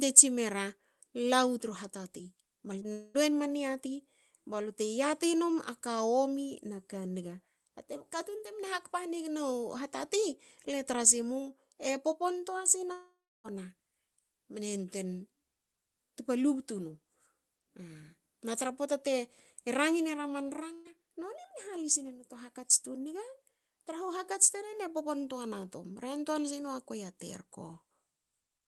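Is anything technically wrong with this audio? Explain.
Yes, the clip has packet-loss problems at four points.

Short concealed packet loss occurs twice in a row, at 2.79 to 2.83 s and 2.83 to 2.86 s. Each time about 20 ms of audio failed to arrive, and the decoder extended the preceding sound before blending back. The result is a brief smear or wobble, and a short consonant can disappear.

A long network dropout is the likely cause of two longer gaps. From 2.92 to 3.16 s, roughly 0.22 s is missing and is covered entirely by a synthesized continuation that fades as a buzz or hiss, with no silent portion. From 12.92 to 13.46 s, about 0.52 s is lost: a fading continuation runs first, then about 0.31 s of silence follows before the audio returns further along, with that stretch absent.

A burst of packet loss runs from 20.74 to 20.87 s, removing about 120 ms. The receiver continued the last sound while attenuating it, producing a held buzz or decaying hiss with no silence. 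Speech then resumes past the gap, with the intervening audio missing.

The band-limited character of the call audio fits an Opus path with a 12 kHz bandwidth.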